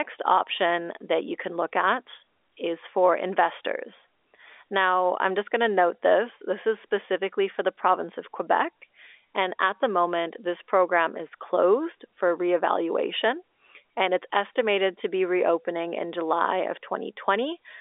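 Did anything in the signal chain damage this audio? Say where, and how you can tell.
No, nothing in the chain has damaged this speech; what you're hearing is just the ordinary telephone band of a G.711 A-law line, running roughly from 300 Hz to 3.6 kHz with nothing above about 3.8 kHz, which is exactly how that codec is meant to sound.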